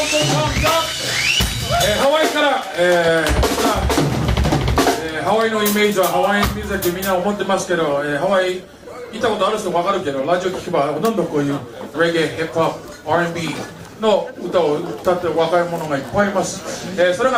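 From 7.53 s to 11.85 s the call's bandwidth estimate collapses and the encoder is pushed to far fewer bits, which fits a call bitrate drop from 96 to about 19 kbps. Coding turns coarse, highs are cut, and for about 2 s the sound is muffled and watery before recovering.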